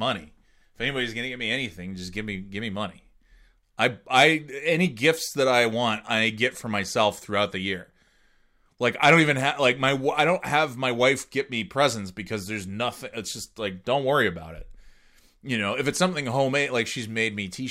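No technical faults can be heard in this recording.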